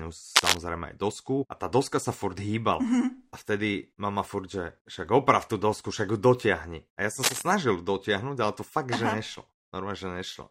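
It's a speech clip with two short bursts of cable scratch noise: one from 0.36 to 0.57 s, right before "aj dosku a tá", and another from 7.22 to 7.42 s, just after "ja som". Both sound like a rough, crackly rustle laid over the audio. The first sits a little above the speech, and the second is about level with it. The likely cause is a worn cable or connector being moved, with its contact flickering as it shifts.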